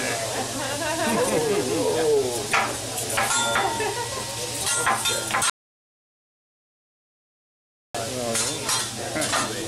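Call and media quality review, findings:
Audio dropout to silence, 5.50–7.95 s: input path likely lost (device disconnect, failed link or stray mute) while the recorder kept writing silence. Sound cuts off abruptly, then resumes mid-flow; 2.45 s of silence, no room tone, content in the gap lost.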